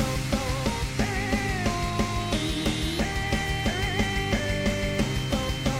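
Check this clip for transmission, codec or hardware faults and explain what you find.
One fault is present, a feedback whistle. From 2.13 s to the end at 5.79 s, a thin, steady 3.1 kHz tone sits about 15 dB beneath the sound, swelling and fading slowly in level. A loudspeaker-to-microphone loop held at the edge of feedback is the likely cause. A spectrogram shows one unbroken horizontal line at 3.1 kHz.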